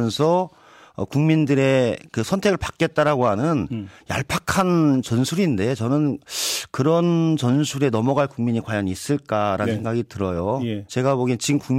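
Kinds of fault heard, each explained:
No technical fault can be heard anywhere in this speech recording. The audio carries on steadily throughout, with no breaks, glitches or sudden changes in level.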